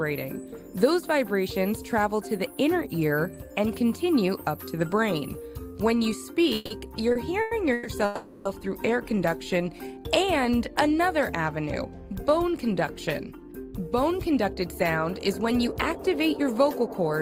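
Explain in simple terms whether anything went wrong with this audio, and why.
Several things go wrong, all between about 6.5 and 17 seconds.

At 6.55 to 6.72 s, 7.41 to 7.53 s, 7.73 to 7.87 s and 8.05 to 8.47 s, the sound hangs on as a fading buzz or hiss, then carries on where it left off. These are call audio freezes, likely from data held up in transit until the receiver's jitter buffer ran dry. Nothing is lost, but pauses of 0.1 to 0.4 s get inserted.

From 7.12 to 7.17 s a sound is held slightly too long. This is a short stall from a late packet. One piece of data arrived late, so the receiver stretched the last sound for 30 ms and then resumed.

From 9.10 to 9.95 s the audio drags to about 92% speed without changing pitch, and some sounds are drawn out. This is a jitter buffer slow-down. The receiver repeated tiny slices to rebuild its reserve, adding 73 ms in total.

From 13.18 to 17.11 s the audio rushes at about 108% speed while keeping the same pitch. 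This is a jitter buffer speed-up. The receiver had too much stored up and trimmed many tiny slices, roughly a third of a second altogether, to catch up.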